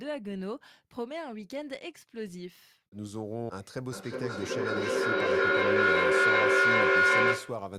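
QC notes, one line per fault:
3.92–7.73 s, feedback echo between two devices: a second device replays the speech into this microphone roughly every 400 ms, and the repeats pile up to about 12 dB above it.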